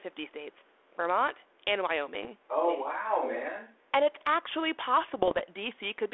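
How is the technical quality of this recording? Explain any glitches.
The recording is narrowband telephone-quality speech, limited to roughly 300 Hz to 3.5 kHz with a light granular texture, which fits G.726 ADPCM at 32 kbit/s. Two kinds of glitch stand out.

From 2.15 to 2.28 s and again from 5.08 to 5.44 s there are pops and rough, gritty bursts with brief jumps in level. These are bit errors on the ADPCM link, at a rate of a small fraction of a percent. Each flipped bit knocks the decoder's step size and prediction off track, so the damage rings on for milliseconds rather than being a single click.

From 2.64 to 2.88 s a faint, delayed copy of the speech can be heard about 15 dB below the main voice, lagging by 0.46 s. A second, much fainter scrap appears from 4.19 to 4.24 s, about 35 dB down. This is likely an echo leak: a loudspeaker at the far end fed back into its microphone, and the echo canceller let part of it through.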